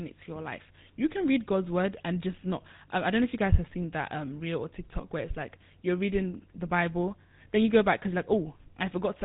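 From start to finish, the speech carries the sound of the GSM full-rate codec. Nothing survives above 3.8 kHz, so it sounds dull and boxed-in. A pulse-driven vocal-tract model rebuilds it, adding a plainly audible buzzy, gravelly roughness, which fits a 13 kbps bitrate.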